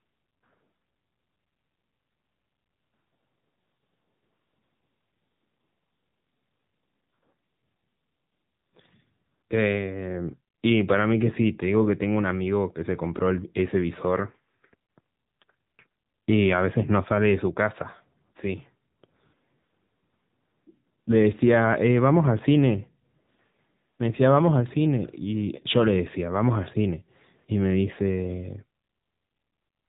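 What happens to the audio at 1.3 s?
At 1.3 s the speech, like the whole clip, passes through the AMR narrowband mobile codec at a bitrate that sounds near 8 kbps, cutting everything above 3.8 kHz and leaving it audibly buzzy and synthetic.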